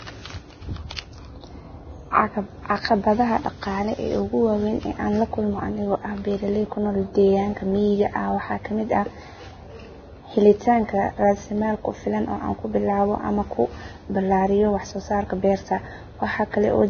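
Vorbis compression is heavy throughout the speech, likely from a very low encoding bitrate, consistent with roughly 18 kbps. Nothing is heard above 6.5 kHz, and the remaining treble is quantised so coarsely that fine detail turns into hiss, leaving sibilants grainy and attacks blurred.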